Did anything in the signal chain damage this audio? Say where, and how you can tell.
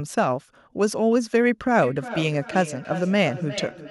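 Yes, at the call-processing stage: feedback echo between two devices. From 1.82 s to the end, the speech returns roughly every 0.4 s, at most about 12 dB below the original. This device's microphone is re-capturing a second device's playback, which this device's echo canceller cannot remove.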